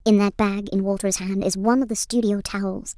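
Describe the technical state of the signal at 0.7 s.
A wrong sample rate is audible at 0.7 s, as it is throughout the clip. The speech runs about 1.38 times too fast and sits roughly 5.5 semitones high, as if 16 kHz audio were played back at 22 kHz without conversion, so the voice sounds hurried and chipmunk-like.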